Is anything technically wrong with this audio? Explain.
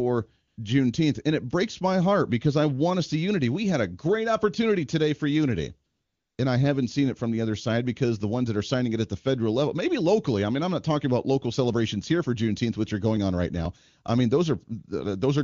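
Yes. AMR comfort noise appears twice in this speech, at 0.47 to 0.57 s (100 ms) and 5.91 to 6.37 s (460 ms). The phone judged these stretches silent and stopped sending speech frames, so the receiver substituted synthetic noise built from a rough level-and-spectrum description. It sounds like a smooth, steady hiss switching in. On a spectrogram it shows as a flat, featureless band with abrupt edges; the waveform shows uniform low-level noise. The wideband codec itself leaves faint or no damage.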